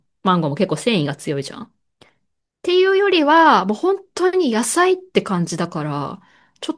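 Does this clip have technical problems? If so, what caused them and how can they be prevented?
No, there are no technical problems to report.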